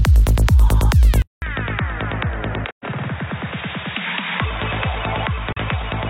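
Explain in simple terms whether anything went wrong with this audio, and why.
At 1.22 s there's a short gap of about 200 ms, then the sound turns dull, quieter and a bit hissier, cut off above 3.8 kHz. That's most likely an input switched to a poorer device.

Later there are two soft-edged dropouts, at 2.70–2.85 s and 5.52–5.58 s. That's AAC frame loss with muting: missing chunks were replaced by silence and faded in and out.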